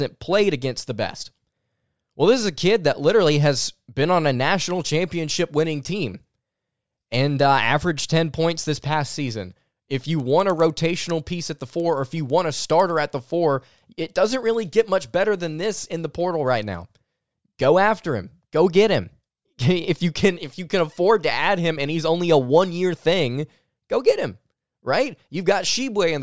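From 10.2 to 13.3 s, a regular ticking at 10 per second rides on the speech, each tick falling every 100 ms. The resampler restarted on every block: each 100 ms block was converted from 48 kHz to 16 kHz in isolation, leaving a small error at every block edge.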